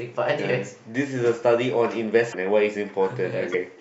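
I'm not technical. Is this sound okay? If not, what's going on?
No. There are two brief glitches from what is likely a broken MP3 bit reservoir, at 2.31 to 2.34 s and at 3.52 to 3.55 s. MP3 files store sound in small chunks about 26 ms long, and each chunk borrows spare room from the chunks before it. When a chunk goes missing, the next one looks back for its borrowed data, gets the wrong bytes, and the speech jumps ahead.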